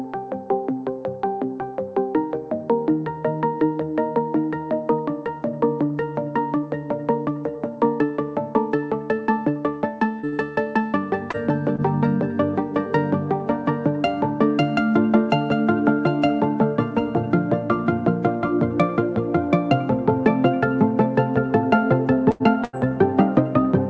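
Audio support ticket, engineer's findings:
Short concealed packet loss at 10.19 to 10.26, 10.29 to 10.35, 11.31 to 11.37 and 11.76 to 11.81 s: brief smears where the jitter buffer's concealment extends the preceding sound across about 30 ms gaps. No fade-out, unlike a burst.

Burst of packet loss at 22.31 to 22.43 and 22.64 to 22.76 s: about 90 ms lost each time. Concealment holds the last sound and then decays it. The audio resumes with a section skipped.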